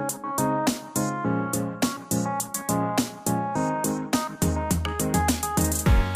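No technical faults can be heard anywhere in the audio. Nothing in the recording or playback stands out as having gone wrong at any point.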